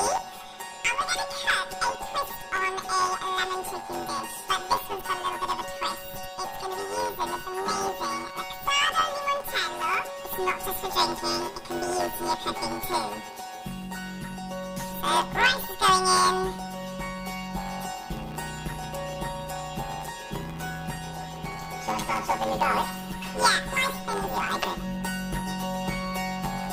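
Throughout the clip, planar audio is read as interleaved. Each block of about 10.7 ms, which fits 512-sample blocks, holds one channel's samples and then the other's. They play as alternating pairs. The result is a robotic buzz near 94 Hz, without a clear octave shift.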